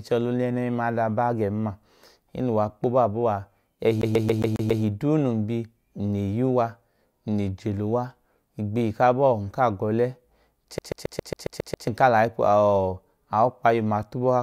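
A rapid, even stutter breaks into this speech recording twice: from 4.01 to 4.83 s, just before "duu num", a sliver of about 0.14 s repeats six times, and from 10.78 to 11.88 s the same-length fragment repeats eight times, each jump marked by a brief mute. This is a CD stuck on one turn, where a scratch knocks the laser back one track at the same point on every rotation.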